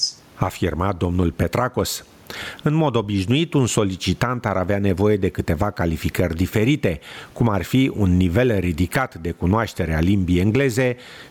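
Speech recorded with gain pumping throughout, with the level swinging by roughly 15 dB. The likely cause is input gain set far too high, with a fast limiter or compressor clamping down on each loud syllable. On the waveform, the peaks look flattened to a near-constant height and the gaps fill in. The room noise sits about 44 dB below the speech.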